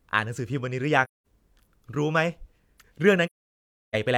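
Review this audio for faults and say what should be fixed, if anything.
Two soft-edged dropouts in the speech come from AAC frame loss with muting: about 1.04 to 1.25 s, and a longer one from 3.26 to 3.95 s. The decoder filled the missing frames with silence, and the overlapping windows fade the sound out and back in, leaving a hole. The gaps run about 0.21 s and 0.68 s, which fits roughly five and sixteen lost frames. To prevent it, add error concealment or retransmission so lost frames are repaired or resent rather than zeroed.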